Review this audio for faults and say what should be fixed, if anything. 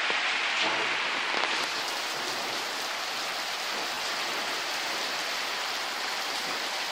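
Lost LE Audio frames between 3.95 and 4.05 s: about 60 ms of audio was lost, scattered over 100 ms in short runs of around 20 ms, which fits six 10 ms frames. The LC3 decoder filled each gap by repeating the last spectrum with random signs, so tonal content smears into noise. A spectrogram shows blurred, noisy patches where harmonic lines break up. The waveform shows brief stretches of hashy fill. Strengthening the Bluetooth link, by improving range, reducing interference or adding retransmission headroom, would prevent these losses.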